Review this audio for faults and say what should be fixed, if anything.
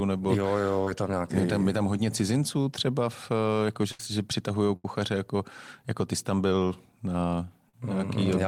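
Short concealed packet loss occurs at 0.84 to 0.87 s, just before "je tam nějaký", and at 7.69 to 7.74 s. About 20 ms and 40 ms of audio never reached the decoder in time. The receiver patched roughly 21 ms and 41 ms by extending the preceding sound and then blending back into the real signal, which leaves a brief smear. What separates these from the bursts is length. The gaps are short enough that the receiver blends straight back into the real audio.

Burst of packet loss occurs at 3.91 to 4.00 s, between "třeba v eh jako" and "že přitahují", and at 4.76 to 4.85 s, between "že přitahují" and "jako jako ty jsi". Each time about 80 ms of audio is gone. The receiver filled about 76 ms and 79 ms by carrying the last sound on and lowering its level, so a held buzz or fading hiss is heard. The audio then resumes further along with material missing, unlike the brief smear of short concealment.

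Both would be reduced by a larger adaptive jitter buffer, forward error correction and better network prioritisation for the call's packets.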